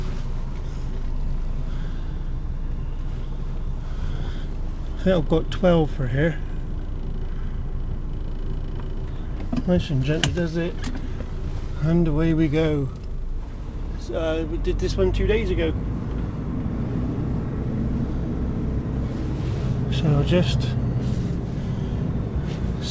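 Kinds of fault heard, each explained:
Nothing stood out on listening, with the call path's band limit at 8 kHz heard only as an absence of the top end.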